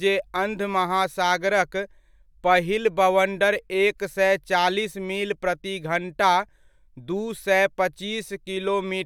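A speech recording with no technical fault to report. Nothing in it calls for a time or a cause.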